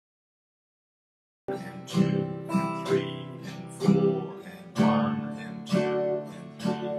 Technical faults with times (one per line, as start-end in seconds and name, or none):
0.00-1.48 cut-off start